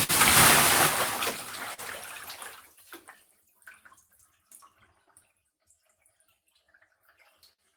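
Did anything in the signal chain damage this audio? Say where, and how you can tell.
Yes. Throughout the clip the timing feels faintly unsteady, with small hiccups at uneven intervals rather than one clean break. This is clock drift between sender and receiver, a network and jitter-buffer problem. The sender's clock runs roughly 3 percent slow relative to the receiver's, so the buffer keeps draining. The receiver has to keep patching the gap, and the patches produce these irregular timing bumps.

Three times the sound hangs for a moment: at 0.03 to 0.11 s, held for 55 ms; at 1.74 to 1.80 s, held for 43 ms; and at 7.53 to 7.60 s, held for 54 ms. Each is a short stall from a late packet. The jitter buffer ran dry, so the receiver stretched the last sound until the packet arrived, then carried on from the same point. Nothing is lost, but the delay grows by each stall's length.

From 2.76 to 6.66 s the pace drags slightly and unevenly, with small repeated catches all in the same direction. 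These are repeated timing corrections at the receiver's buffer. To keep up with the slow sender, it repeatedly inserts short pieces, playing this stretch at about 97 percent speed. Altogether it adds around 150 ms. Each edit is tiny.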